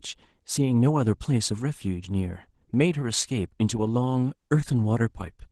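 Throughout, Opus voice compression leaves the speech hoarse and faintly robotic, consistent with hybrid coding near 16 kbps; a spectrogram shows coarse, smeared energy above 8 kHz.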